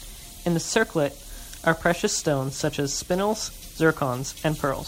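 There are no technical faults to describe at any point in this speech recording.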